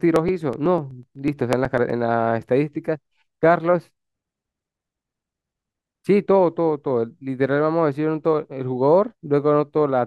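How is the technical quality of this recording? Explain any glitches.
The recording has one glitch, near the start. From 0.16 to 1.90 s there are periodic USB or driver dropouts. Every 0.124 s, roughly a millisecond of audio is skipped. A background task stalls the bus or driver at that fixed interval. The result is a steady train of small ticks over the speech.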